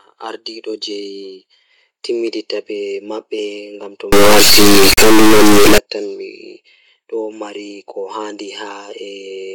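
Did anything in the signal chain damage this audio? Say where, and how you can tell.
Yes. Between 4.12 and 5.78 s the speech turns into an extremely loud, harsh buzz like a square wave, dropping to silence in the quietest moments. This is integer read as float at the sample-format conversion stage. The bit patterns, which fit 32-bit integers being read as 32-bit floats, decode to values that are either nearly zero or far beyond full scale, so the output jumps between silence and the clipping rail. Ordinary overload clipping would keep the speech's shape with flattened peaks rather than replacing it with a buzz.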